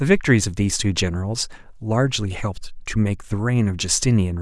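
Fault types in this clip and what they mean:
No technical fault can be heard in the recording, and the signal stays steady and continuous throughout.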